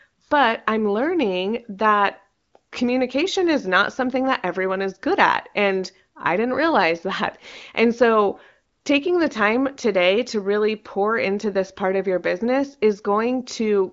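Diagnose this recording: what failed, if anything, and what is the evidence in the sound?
Nothing failed in this recording, and the sound offers no evidence of a fault at any stage, with the speech carried over an AMR wideband (HD Voice) path.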